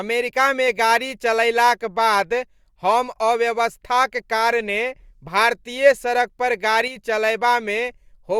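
At 6.88 s, right after "कारणे भारतीय सड़क पर", the speech drops abruptly by about 6 dB for 84 ms and then returns to its former level at 6.96 s. This is most likely one channel dropping out: with one side of the stereo pair gone, the mono sum keeps only half of the shared signal. The sound never goes silent and its tone stays the same, which sets it apart from a full dropout or a filtering fault.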